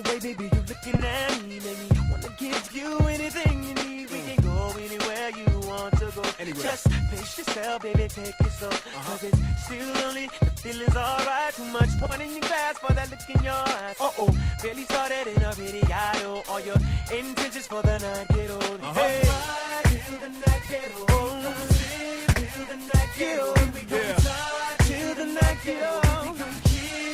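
Brief garbled flutters occur at 0.91–1.03, 2.62–2.73, 6.65–6.72, 12.01–12.12, 20.61–20.71 and 22.28–22.40 s. These are frames out of order: two adjacent 40 ms blocks (30 ms at 6.65 s) play swapped, which points to runs of four or three frames.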